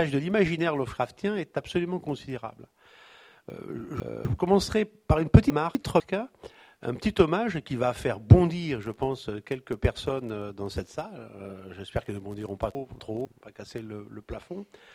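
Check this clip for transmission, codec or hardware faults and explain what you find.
Three short jumbled passages are audible, at 3.5 to 4.25 s, 5.5 to 6.0 s and 12.75 to 13.25 s, all caused by chunks out of order. Each sounds like the audio stumbling, with a fragment played in the wrong place. A 250 ms chunk arrived late and played after the chunks meant to follow it, two chunks late in the first case and one in the others. Nothing is lost, but each reordering leaves three hard joins.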